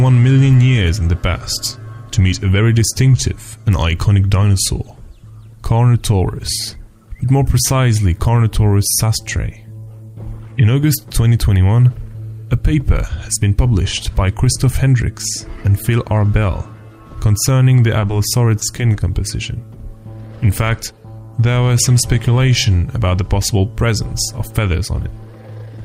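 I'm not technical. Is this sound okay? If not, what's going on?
No, not quite. There's a short stretch of short concealed packet loss just before the 19-second mark, at about 17.99, 18.07, 18.59 and 18.92 seconds. Each time, a tiny piece of the sound, about 20 milliseconds, didn't arrive in time, so the receiving end patched the gap by stretching out whatever it had just heard and then blending back in. You'd hear each one as a quick smear or little wobble, bunched together within about a second.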